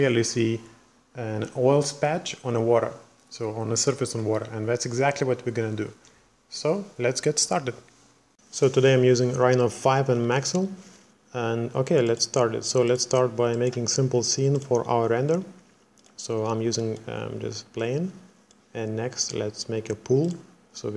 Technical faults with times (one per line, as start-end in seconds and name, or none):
none